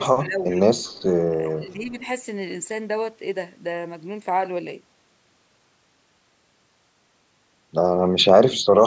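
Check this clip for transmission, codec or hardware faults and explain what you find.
Two echo-canceller problems are audible in the speech.

Speech suppressed in double talk, 0.25–0.58 s and 1.5–2.03 s: the voice dips by up to about 10 dB, likely because the canceller attenuated both talkers during overlap.

Echo leak, 0.5–0.55 s and 0.84–1.03 s: a very faint copy of the voice returns 392 ms late. The likely cause is loudspeaker pickup that wasn't fully cancelled.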